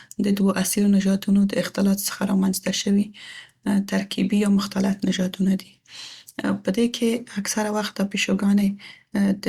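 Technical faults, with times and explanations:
No technical faults with times and explanations are present in this speech clip.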